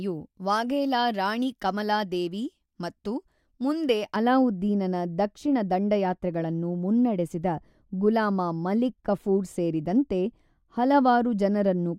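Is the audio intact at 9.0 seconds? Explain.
No. At 9.0 seconds the clip is inside a stretch of wrongly applied de-emphasis that begins at about 4.16 s, just after "ಕಮಲಾ ದೇವಿ ಮತ್ತು ಮುಂದೆ", and runs to the end. A treble cut meant to reverse pre-emphasis has been applied either where none existed or a second time, tilting the response smoothly downward to about 11 dB lower at 10 kHz than at 1 kHz. The speech sounds dull and muffled. On a spectrogram the upper band fades gradually rather than stopping at a sharp edge.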